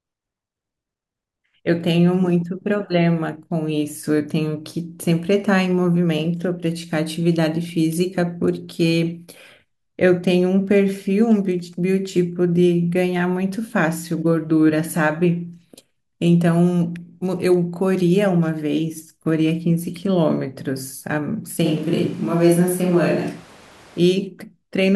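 From 21.67 s to 23.98 s the speech turns abruptly roomy and hollow, with thinner bass and room noise rising to roughly 25 dB below the speech, though the level barely changes. This points to a switch to a distant microphone, likely after the close microphone dropped out, before the sound snaps back.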